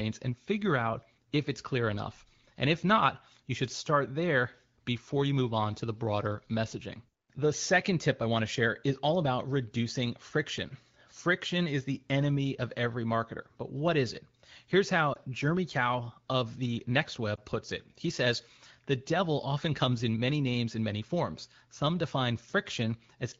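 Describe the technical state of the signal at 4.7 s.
At 4.7 s the signal is intact, with the speech passing cleanly through the AMR wideband (HD Voice) codec and no fault present.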